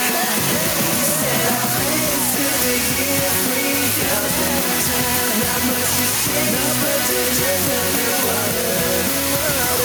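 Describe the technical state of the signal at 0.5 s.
At 0.5 s the signal is intact, with no audible technical fault at that moment.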